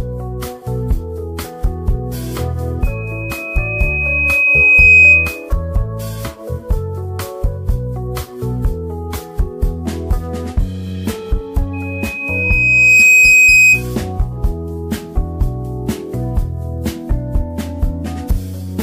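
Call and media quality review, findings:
Loudspeaker feedback squeal at 2.82–5.49 s and 11.73–13.84 s. Steady 2.5 kHz tone swells over a second or two, well above the sound. Mic picking up its own speaker, loop gain above one.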